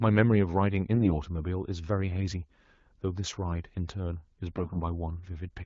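Speech carried over an AMR wideband (HD Voice) link, with its band-limited but clear character pointing to a mid rate of about 12.65 kbit/s. Two bursts of AMR bit errors turn the sound hoarse and gargly, from 0.94 to 1.14 s and from 4.56 to 4.80 s. Weakly protected bits in the frames arrived flipped, with the first burst heavier at around one bit in ten. Misplaced excitation pulses and wrong gain and spectral values roughen the sound while it keeps its pitch and level.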